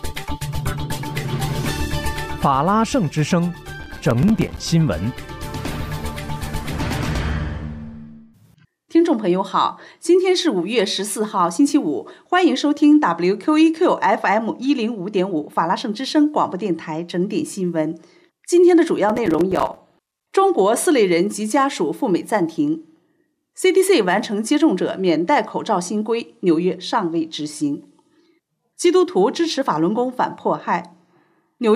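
Processor overload crackle hits from 3.83 to 4.58 s and again from 19.10 to 20.26 s: dozens of tiny, roughly 5 ms buffers missed, each dropping to silence, giving gritty tearing.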